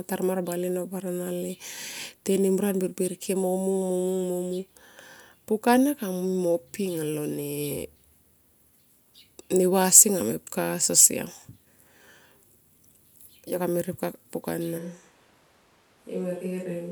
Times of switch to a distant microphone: 14.80-16.91

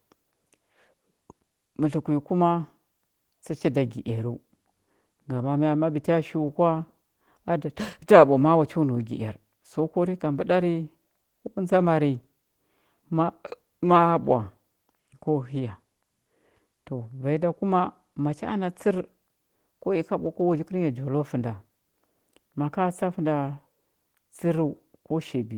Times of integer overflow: none

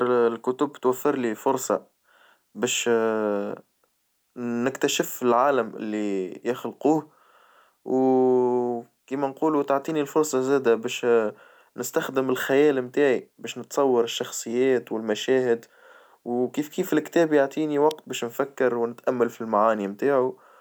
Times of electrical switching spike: 17.91

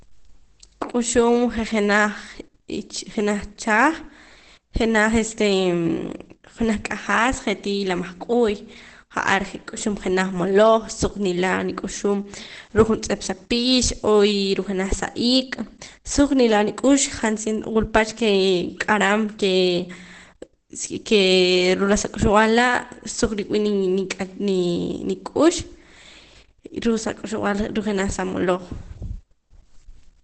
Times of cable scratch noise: none

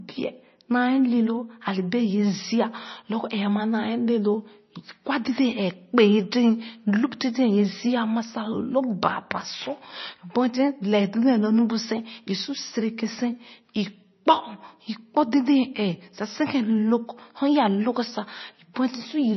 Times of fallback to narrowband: none

